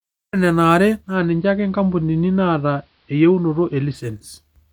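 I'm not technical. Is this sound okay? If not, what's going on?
No. From about 1.00 s to 4.12 s, the speech drops into a digital radio blending to analogue. The radio lost its digital signal and switched to the same station's AM broadcast. The change takes about a fifth of a second each way. During that stretch the sound gets duller, because AM carries less treble. A faint hiss appears, and the speech is slightly quieter. At 4.12 s it blends back to digital.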